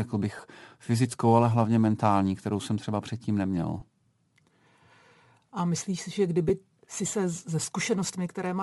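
Across the whole speech clip there is a breathy, grainy edge on the upper frequencies, most likely from Bluetooth LC3 compression. At this setting the codec discards much of the fine detail above the core speech band and fills those regions with shaped noise. On a spectrogram the highs look speckled and patchy rather than following the speech harmonics. The plainly audible damage and the short blocks fit 7.5 ms frames at a rate around 48 kbps.

At 0.37 s, just before "fyzickou ale hlavně mentální", there is a burst of lost LE Audio frames. At 3.80 s, right after "jsem třeba předtím neměl", it happens again. At 6.49 s, between "myslíš si že" and "si se ze", there is a third. Each gap lasts about 15 ms, which fits two missing 7.5 ms frames. The decoder fills each gap by repeating the last spectrum with scrambled phase. The sound turns briefly into a hissy smear. A spectrogram shows a thin vertical band of diffuse noise where the harmonics break, and the waveform shows a short stretch of irregular, noise-like texture.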